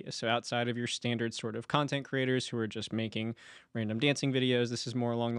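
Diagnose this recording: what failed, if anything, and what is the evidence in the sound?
Nothing failed; no fault can be heard in the recording.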